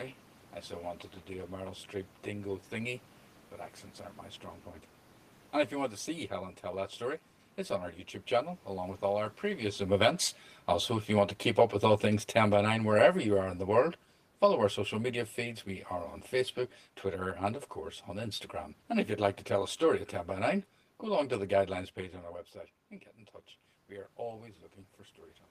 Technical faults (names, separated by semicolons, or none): channel delay (comb filtering); automatic gain falling